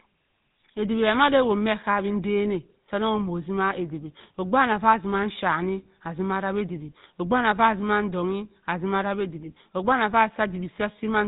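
Throughout, the speech carries GSM full-rate codec damage: pulse-driven vocal-tract coding leaves a plainly buzzy, gravelly roughness, and the spectrogram shows nothing above 3.8 kHz.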